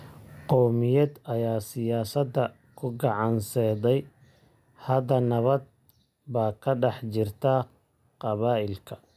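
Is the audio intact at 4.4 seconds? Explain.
Yes, the speech at 4.4 seconds plays through cleanly, with no dropout, click, distortion or other fault at that moment.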